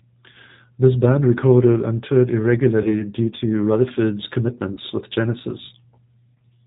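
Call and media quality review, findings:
G.729 codec, 8 kbit/s, throughout: the speech is rebuilt from a vocal tract model plus sparse pulses. Band is capped at 4 kHz, with plainly audible rough, synthetic, dull texture.

VoIP packet loss concealed by the speech codec at 2.82–2.91 s (after "band recorded and toured", before "due to"), 4.73–4.80 s and 6.36–6.38 s: the decoder extrapolates its last frame. Each gap comes out as a short fading smear of buzzy tone or coloured noise. The gaps fit roughly 20, 40 and 20 ms of lost packets, and the voice stays weak briefly afterward.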